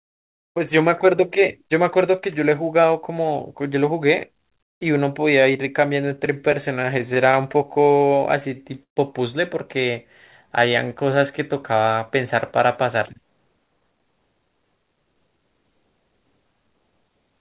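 From 6.16 to 8.98 s the speech hits repeated stalls (stutter): 18 short hitches where the receiver ran out of late packets and stretched the last sound to fill the wait, the longest about 130 ms. Nothing is actually lost, unlike dropout clicks, so the speech drags rather than skipping.

Between 9.91 and 11.15 s a jitter buffer slow-down stretches the speech to about 95% speed, adding 65 ms by repeating single pitch periods. The pitch holds steady, which separates it from a tape-style slowdown, and sounds are simply drawn out. This sits within narrowband audio with nothing above 4 kHz, which fits a G.711 call path.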